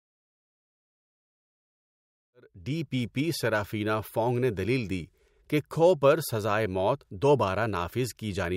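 No technical faults can be heard in this speech.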